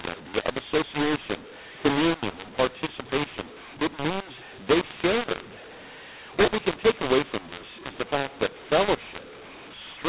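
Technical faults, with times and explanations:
Throughout, mu-law and A-law mixed up: the speech was coded as A-law but decoded as mu-law, so every 8-bit code lands on the wrong point of the companding curve. Some levels come out too loud and others too soft, which gives the voice a gritty, harsh edge. The near-silent codes get lifted well above zero, so the pauses hiss. It's still telephone-band audio at 8 kHz sampling, with nothing above 4 kHz.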